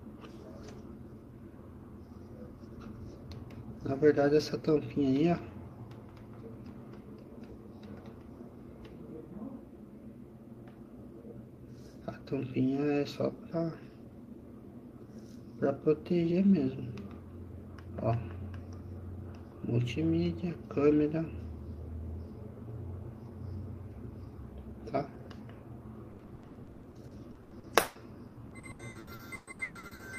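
From 26.11 to 30.02 s, repeated packet loss turns the sound choppy and robotic: gaps up to 160 ms, concealing 43%, unlike a single dropout's one clean hole.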